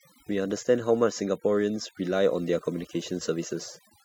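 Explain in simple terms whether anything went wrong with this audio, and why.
Overdone noise removal runs through the whole clip: the cleanup tool cut too hard, leaving near-silent gaps with twinkly specks.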